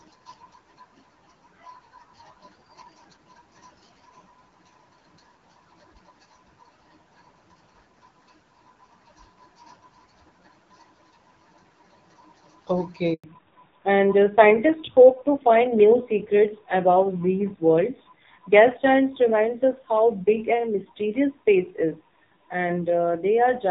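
Speech, carried over HD Voice for the first 13 seconds with the clarity of a mid-rate AMR-WB link, consistent with around 12.65 kbit/s, then breaks. At 13.14 s the sound cuts out abruptly and stays silent for 100 ms, until 13.24 s. This is a handover gap: the call was passed from one network to another, no speech frames arrived during the switch, and whatever was said in that tenth of a second is gone. From 13.24 s to the end the audio sounds duller and more muffled, with a rough, grainy edge, and nothing at all is heard above 4 kHz. This is a fallback to narrowband. After the handover the call dropped from the wideband HD Voice codec to an older narrowband one, which cannot carry the upper band. The added roughness points to a low AMR-NB rate, around 5.9 kbit/s.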